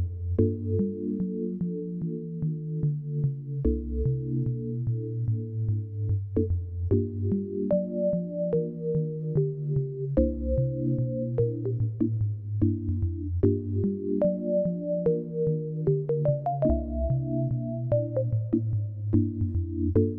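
No technical faults are audible.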